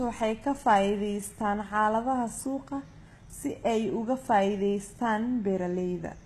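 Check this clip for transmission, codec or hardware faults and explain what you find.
One codec fault runs through the whole clip. The treble is bright but synthetic, with gritty, lispy s sounds, and nothing is present above 12.4 kHz. This is likely HE-AAC compression, which fits a very low bitrate of around 16 kbps. Only the lower spectrum is coded. The upper bands are copied up from below and shaped coarsely, so their harmonics fail to line up.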